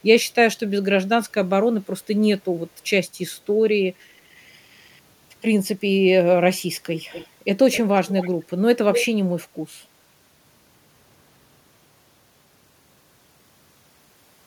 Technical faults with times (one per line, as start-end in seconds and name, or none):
6.97-7.27 echo leak
7.72-8.31 echo leak
8.93-9.06 echo leak